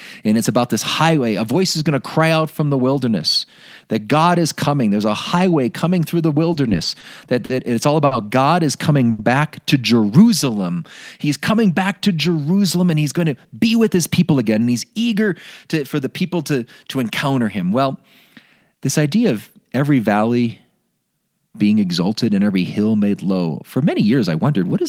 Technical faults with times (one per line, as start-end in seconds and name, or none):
6.53-7.05 repeated stalls (stutter)
7.45-7.51 short stall from a late packet
8.05-8.13 short stall from a late packet
9.11-9.21 short stall from a late packet
10.45-10.76 jitter buffer slow-down
12.89-14.68 jitter buffer speed-up